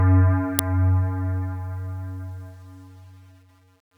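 An uninitialised buffer was played at 0.59 s, reading leftover memory as samples: a 2.9 ms loud crack, which fits a 128-sample buffer.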